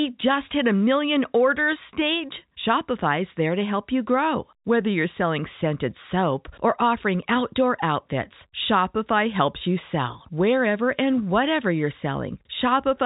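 No technical faults can be heard in this speech.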